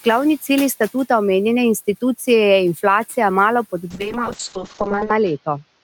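At 3.91 s the speech turns rough and muffled, and it stays that way to the end of the clip. This is a call bitrate drop. The call's bandwidth estimate fell, so the encoder had far fewer bits to spend. Detail is coded coarsely, and the top end is cut from about 20 kHz down to 8 kHz. The change points to a fall from roughly 48 kbps to 7 kbps, held at its lowest for about 1.2 s. Room noise sits about 23 dB below the speech.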